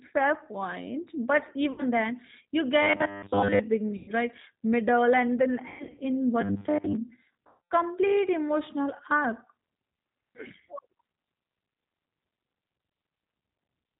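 Speech passed through the G.729 codec at 8 kbit/s. Its damage is plainly audible throughout: a rough, synthetic edge rebuilt from a pitch predictor and sparse pulses, and on a spectrogram nothing appears above 4 kHz. VoIP packet loss concealed by the speech codec breaks in four times: 1.72–1.83 s just before "then you" (60 ms lost), 3.96–4.14 s (120 ms), 5.68–6.02 s after "and then" (240 ms scattered over 300 ms), and 7.47–7.73 s (240 ms). Each gap is bridged by a fading extrapolation that looks like smeared, steadily weakening energy on a spectrogram and a shrinking envelope on the waveform. The level stays low briefly after each gap. Robotic sound from repeated short buffers appears at 2.81–3.59 s, after "then you", and at 6.41–6.95 s. Over most of those spans the sound turns into a rigid, metallic 100 Hz buzz, drawn as evenly spaced horizontal harmonics, with a waveform repeating every 10 ms. 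The likely cause is late-arriving audio padded by looping the last short buffer.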